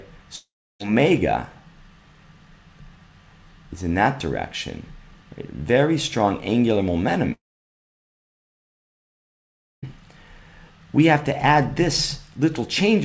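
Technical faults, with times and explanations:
0.36–0.81 s and 7.33–9.84 s, long network dropout: the sound just stops. The receiver stretches the last bit into a short fading buzz, then it goes quiet, for about 0.3 s the first time and nearly 2.4 s the second. It picks up again with roughly 0.44 s and then 2.5 s missing. The likely cause is packets that never arrived. Around it you can still hear the call codec cutting everything above 8 kHz.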